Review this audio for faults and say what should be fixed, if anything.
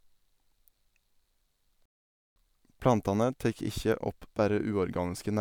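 At 1.86 s the speech cuts out abruptly in mid-flow and the output stays fully silent until 2.36 s, a gap of about 0.51 s, after which the sound resumes. This is a playback stall: the player most likely ran short of buffered data, or its audio thread was blocked by other work, so nothing reached the output until the supply recovered. To prevent it, give the player a deeper buffer and run audio on a high-priority thread that never waits on disk or network.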